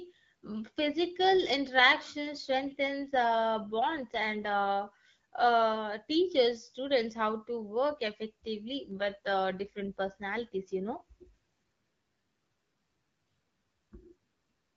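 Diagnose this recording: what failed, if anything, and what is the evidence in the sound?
The fault is an AMR rate drop at the network/codec stage: from 3.04 to 4.71 s and 8.92 to 11.26 s the speech turns rougher and more synthetic, fitting a fall from 12.65 to 8.85 kbit/s. The band stays full with no gaps, unlike packet loss or narrowband fallback.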